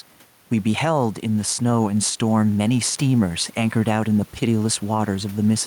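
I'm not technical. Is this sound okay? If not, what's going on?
No. From start to finish there is gain pumping: the level is pulled down each time the speech gets loud. The loud and soft parts sit closer together than they should, which makes the speech sound squashed. The likely cause is the microphone level set far too high, with an automatic limiter repeatedly pulling it down. The room noise itself sits well below the speech.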